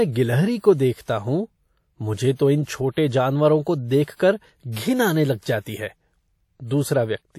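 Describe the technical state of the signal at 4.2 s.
A short hiss rises just ahead of a sharp onset, running from about 4.16 to 4.19 s and softening the attack. This is pre-echo: quantisation noise sized for the loud onset spreads back across roughly 39 ms of the preceding quiet stretch within the same transform block.

The speech around that moment also has a ringing, washy quality, with hiss that swells and falls along with the signal and nothing above 19.3 kHz. This is likely WMA compression, and the plainly audible damage fits a bitrate near 48 kbps, where weak components are discarded.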